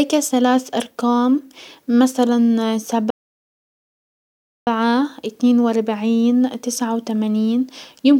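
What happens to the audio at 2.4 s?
Nothing goes wrong at 2.4 s; the speech there is intact, with no dropout, click, distortion or other fault.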